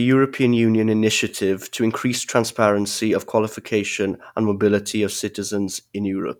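No dropouts, clicks, distortion or other technical faults are audible anywhere in this speech recording.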